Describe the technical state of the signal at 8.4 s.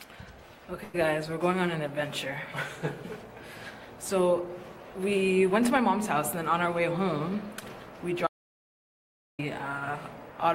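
At 8.4 s the signal is inside an audio dropout to silence. It runs from 8.27 to 9.39 s, about 1.1 s. The input was likely lost while zeros kept being written. The sound cuts off abruptly into dead silence, with no room tone.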